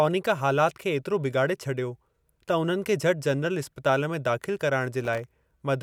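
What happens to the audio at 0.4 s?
Nothing goes wrong at 0.4 s; the speech plays through that moment intact.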